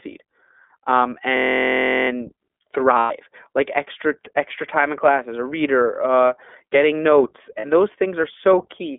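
It's a speech clip squeezed through the iLBC codec the whole way, and the damage is plainly audible. Nothing gets out below roughly 250 Hz or above 3.5 kHz, so it has that thin, phone-line narrowband feel. Each chunk of excitation is coded on its own with no help from the previous one, which gives the speech a slightly rough, synthetic grain. The character points to iLBC's 20 ms frame mode at about 15 kbps.

From 1.37 to 2.09 s there's a system hang loop. The machine or driver stalls while the sound hardware keeps replaying the same little slice of buffer, roughly 31 times. Each slice is 23.22 ms, which fits a 1024-sample buffer, so the repeats fuse into a steady buzz at about 43 Hz rather than a stutter. Hardly any audio seems to go missing around it.

Then there are two spots of lost iLBC frames, at 2.98 to 3.12 s (120 ms) and 7.60 to 7.65 s (40 ms), consistent with six and two 20 ms frames going missing. 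In both, the decoder papers over the hole by repeating the last pitch cycle with some noise mixed in, so you hear a held, faintly buzzy vowel-like sound. Since iLBC frames don't depend on each other, the speech snaps back right after each gap.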